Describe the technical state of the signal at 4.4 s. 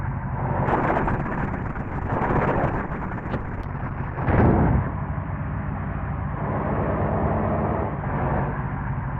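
At 4.4 s the sound is muffled and coarse, with nothing above 6 kHz where the top previously reached 20 kHz. This is a call bitrate drop running from 0.67 s to the end at 9.2 s. The encoder was starved of bits, consistent with a fall from around 64 kbps to about 7 kbps.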